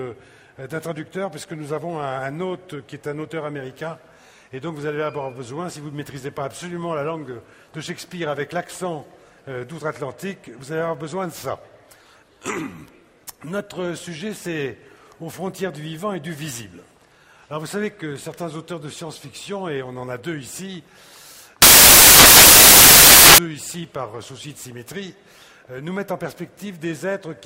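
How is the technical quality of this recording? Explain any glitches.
One glitch stands out: from 21.62 to 23.38 s, samples built from the wrong bytes turn the audio into loud, harsh broadband noise, since misaligned low-order bytes dominate each value; the spectrogram shows broadband fill, the waveform a dense block.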